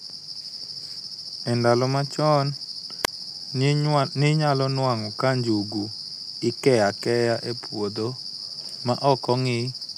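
A wireless microphone squelch dropout occurs from 3.03 to 3.08 s. The radio link from an analogue FM microphone weakens until the receiver's squelch circuit decides the signal is too poor and mutes its output. A short rise of hiss or static is heard, then a hole of near silence lasting about 29 ms cuts into the speech, before the signal recovers and the voice returns.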